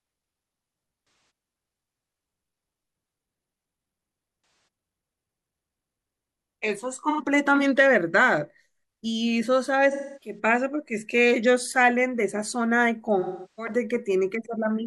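At 1.00 to 1.30 s, 4.37 to 4.67 s, 7.09 to 7.21 s, 9.91 to 10.39 s and 13.19 to 13.73 s, the speech breaks into patches of AAC frame loss with concealment. Chunks of the coded stream went missing. The decoder patched each gap by rebuilding sound from the last good spectrum. Each patch sounds smeared and noisy rather than clean. Most gaps last about 0.3 s. The one near 7.1 s lasts 85 ms. The last lasts 384 ms, which fits roughly nine lost frames.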